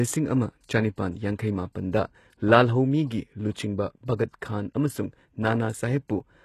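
Speech runs the whole length with a treble that sounds synthetic: s sounds come out gritty and lispy, and the top end has a metallic sheen, with nothing at all above 12.3 kHz. The damage is plainly audible throughout and points to HE-AAC compression at a very low bitrate, around 16 kbps. The likely mechanism is spectral band replication, where copied lower bands stand in for the real treble, so harmonics no longer line up above the crossover.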